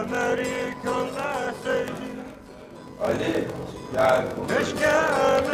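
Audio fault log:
throughout, block size mismatch (padded): one stage hands over blocks shorter than the next stage reads, so every read block is topped up with zeros, which fits a 1024-sample read size. That silent gap in each block chops the sound into a steady buzz at 46.9 Hz, the block rate. Because each block carries less audio than its length, the material plays at 0.861 times normal speed, dragging slower while its timbre stays about where it belongs.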